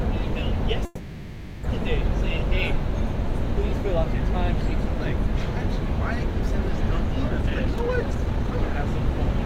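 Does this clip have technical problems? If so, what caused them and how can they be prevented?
Yes. From 0.85 to 1.64 s there is a call audio freeze. The last bit of sound is stretched into a fading buzz lasting about 0.78 s, likely because delayed packets drained the jitter buffer. No silence follows, and the audio resumes where it stopped, so nothing is lost but it now runs 0.78 s late. On a spectrogram this shows as smeared, horizontally streaked energy that thins out. A larger or adaptive jitter buffer on a steadier network path would prevent it.

From 7.28 to 8.69 s there is a jitter buffer speed-up. The receiver drains its backlog by cutting many short pitch-period slices, about 0.7 s in total, so the sounds play at roughly 144% speed with unchanged pitch. On a waveform the events look compressed closer together. Gentler, slower buffer adaptation would prevent it.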